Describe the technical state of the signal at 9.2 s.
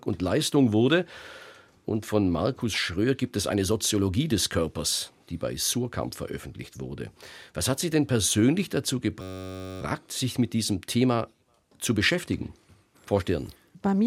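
A steady buzz near 94 Hz replaces the speech from 9.22 to 9.81 s, right after "denn persönlich dazu", with the talk resuming at "sich mit diesem". This is a system hang loop: while the system stalled, the sound hardware kept replaying one 10.67 ms slice of its ring buffer, which fits a 512-sample buffer. It repeated that slice dozens of times, and the repetition rate produces the buzz.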